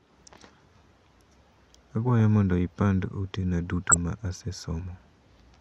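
The clip is speech with one burst of DAB burbling. It starts just after "mondo ipandd ote na", at 3.89 s, and lasts until 3.96 s. For about 70 ms the sound burbles. Weak reception let bit errors slip past the error correction into the MP2 audio. Corrupted samples put short blips of noise in single sub-bands. The length fits a handful of damaged audio frames, with an error rate of a few tenths of a percent.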